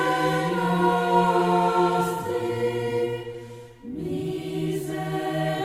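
No technical faults are audible.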